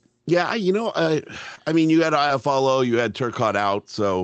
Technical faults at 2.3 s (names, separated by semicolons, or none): short concealed packet loss